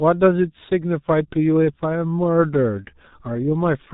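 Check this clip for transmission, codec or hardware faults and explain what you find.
The speech is muffled and hoarse from start to finish, with blurred consonants and nothing above 4 kHz. This is heavy G.723.1 codec damage, a low-rate fit consistent with about 6.3 kbit/s. Its 30 ms frames and slowly updated vocal model smear fast consonant transitions and roughen the voice.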